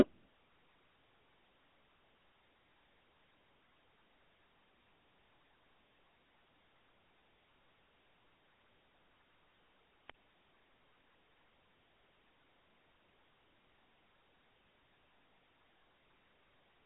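The whole clip goes through what sounds like the GSM full-rate codec, consistent with 13 kbps: buzzy, gravelly speech, narrowed to about 200 Hz to 3.5 kHz with nothing above 3.9 kHz. At 10.06 s there's a wireless microphone squelch dropout. The radio link fades, the receiver mutes for about 53 ms, and the sound returns by 10.16 s.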